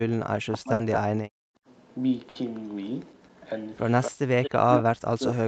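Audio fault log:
0.46–1.28 s and 4.35 s to end, speech suppressed in double talk: the speech dips by up to about 40 dB, with roughly 0.7 s affected in the first stretch, likely because the echo canceller turned the microphone down while both sides talked. Unlike packet loss, nothing is held over or skipped. The sound is simply attenuated, thinned or broken into pieces.
0.73–0.82 s and 2.29–2.38 s, burst of packet loss: each burst has about 60 ms of concealment followed by 60 ms of missing audio. The last sound is held as a fading buzz or hiss, then the audio jumps ahead. That held-then-skipped pattern sets these apart from the smooth level dips of suppression.
0.93–0.97 s, 4.02–4.11 s, 4.44–4.82 s and 5.27–5.35 s, echo leak: a delayed copy of the speech trails the original by 224 ms, about 10 dB below it and about 15 dB below in the last instance. Its likely cause is residual loudspeaker pickup the canceller missed. 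It is a repeat, not a dropout.
1.56–1.66 s, background gated by the echo canceller: for about 100 ms the room sound falls by about 32 dB and then returns. Only the background ducks, without speech loss or skipped audio, as the canceller clamps down during loudspeaker playback. The whole clip is band-limited to 8 kHz, consistent with the Opus call path.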